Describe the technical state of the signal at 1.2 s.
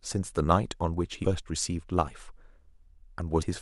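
At about 1.23 s the speech is hit by damaged data in a compressed stream: a brief burst lasting under 20 ms. Corrupted bytes in the encoded file leave the decoder unable to read the frame at that point, so it produces garbled output before regaining sync on a valid frame.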